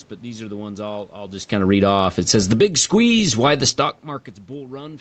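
Just after "ones I'll I'll just", from 1.54 to 2.79 s, the speech and its background sink together by about 12 dB: automatic gain falling, as the gain control judged the input too loud or its background noise too strong.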